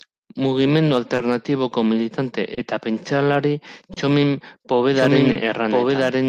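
A speech recording with three overlapping timing problems. Running through the whole thing is clock drift between sender and receiver. The sender's clock looks to be about 2 percent slow, so the jitter buffer keeps draining and the receiver has to pad. You hear it as small, uneven timing hiccups scattered across the clip rather than one clean glitch.

Four of those hiccups stand out as a short stall from a late packet, at 1.15 to 1.20 s, 2.54 to 2.59 s (right before "eta pentsalari"), 3.93 to 3.98 s (just after "militante eta pentsalari") and 5.32 to 5.37 s. In each, the buffer ran dry, the receiver stretched the last bit of sound by about 30 ms until the packet turned up, then carried on from the same spot. Nothing gets skipped, but the sound hangs a beat too long, and the delay steps up about 30 ms each time.

From 4.93 s to the end there's also a doubled audio track. A second, full-band copy of the same speech sits roughly a second behind the original at about the same loudness. 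It cuts in abruptly and has no decay or room colour, so it isn't an echo. It's likely a second capture on a slower path, or two misaligned copies left in an edit.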